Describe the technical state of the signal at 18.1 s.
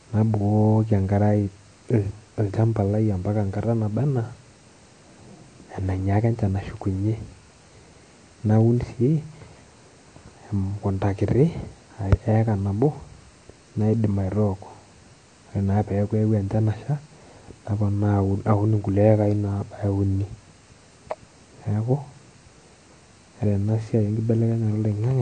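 At 18.1 s the speech sounds dull and smeared, with a swirly, fizzy edge on sustained sounds and sibilants and nothing above 9 kHz. The likely cause is AAC compression, present throughout the clip and consistent with AAC-LC at around 32 kbps, which coarsely quantises each frame's spectrum and cuts off the top.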